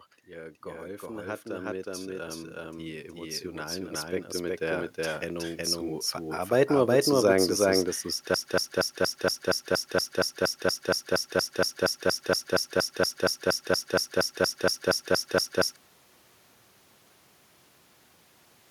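From the first moment to the last, the speech carries a doubled audio track: a second, full-band copy runs roughly 400 ms behind the first at about the same level, with no reverberant tail or room colouring. The likely cause is the signal being captured a second time along a slower path. On a waveform every syllable envelope appears twice, offset by a constant gap. On a spectrogram each burst of energy is shadowed by an identical one just to its right, giving a stuttering, echo-like overlap throughout.

Between 0.28 and 5.66 s, automatic gain rising lifts the level by about 10 dB. The gain control judged the input too quiet and kept raising its amplification, so speech and background noise swell together over those five seconds. A second, shorter rise of about 4 dB follows from 6.49 to 8.05 s. On a waveform both appear as envelopes that widen steadily, and on a spectrogram the noise floor brightens along with the speech bands.

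From 8.34 to 15.76 s a broken-record loop takes over. A fragment 0.23 s long repeats exactly, back to back, 32 times, and the speech that should have played across those seven seconds is lost. The likely cause is a stalled player or stream resending the last piece it held. The waveform shows an identical short shape tiled across the span, and the spectrogram shows a regular comb of repeated blocks.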